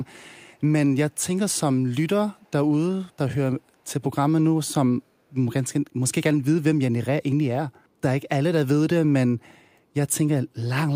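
At 2.45 to 2.5 s, a brief echo leak is audible: a faint delayed copy of the speech arrives about 264 ms after the original, sitting very low, around 40 dB beneath the direct signal, and lasting only a short scrap. The likely cause is a far-end loudspeaker whose echo canceller failed to fully subtract its own microphone pickup, so a residue of the returned audio was transmitted back.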